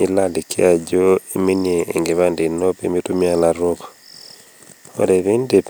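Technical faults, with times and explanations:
No technical faults are audible anywhere in the speech.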